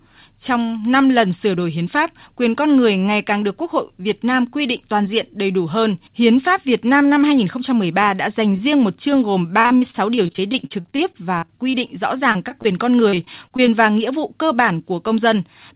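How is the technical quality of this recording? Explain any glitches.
The speech has packet-loss glitches in two stretches and a cluster of short losses between them, heard through a narrowband call path with nothing above 4 kHz, which points to a G.711 codec at 64 kbps.

From 9.6 to 11.9 s and again from 13.09 to 13.69 s there is repeated packet loss, giving a robotic sound. Gaps of up to about 40 ms recur, and the receiver bridges each by extending the last sound, so roughly a fifth to a quarter of the stretch is concealed. The result is choppy, with pieces missing.

Between those stretches, short concealed packet loss occurs at 12.32–12.36 s, 12.49–12.52 s and 12.62–12.67 s. Each replaces about 20 ms of audio with extrapolated sound, heard as a brief smear or wobble.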